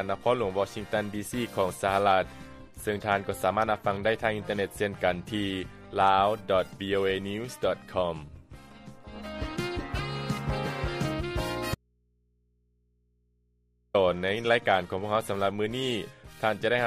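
At 11.75 s the sound drops abruptly to faint mains hum for 2.2 s, an audio dropout to a faint residue, likely the signal lost while the input stayed live.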